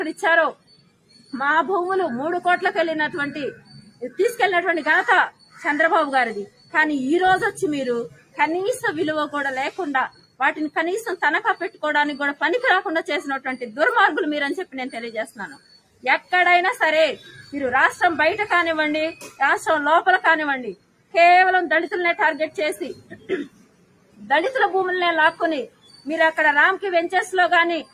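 Throughout, the level pumps and flutters. Sustained sound and tails sink by around 15 dB while attacks come through, the mark of a noise suppressor applied to music or sounds that mistakes steady content for noise. Within that, sound is cut by the noise suppressor at 0.54–1.33 s, 3.54–8.38 s, 10.09–11.83 s, 14.65–17.53 s and 19.15–26.07 s. Held portions drop by up to about 18 dB as the suppressor clamps down on them.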